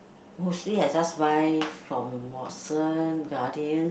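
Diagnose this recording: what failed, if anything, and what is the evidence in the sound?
Nothing failed; the call-path speech shows no faults.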